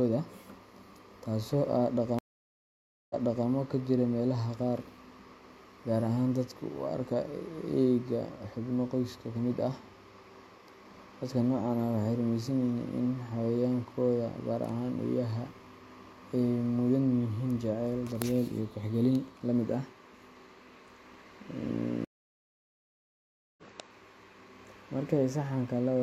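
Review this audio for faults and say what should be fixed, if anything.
Speech goes silent twice and resumes at a jump. At 2.19–3.47 s, a 0.91 s gap ends with 0.37 s repeated before "ka jira meelaha qaar". At 22.05–23.63 s, a 1.53 s gap skips about 1.5 s ahead. Both are stream reconnects, where the connection dropped and a fresh decoder restarted mid-stream. Deeper client buffering with position-aware resume would prevent them.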